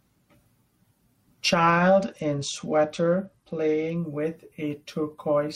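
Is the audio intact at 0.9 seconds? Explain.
Yes, the speech plays through cleanly at 0.9 seconds, with no dropout, distortion or other fault at that point.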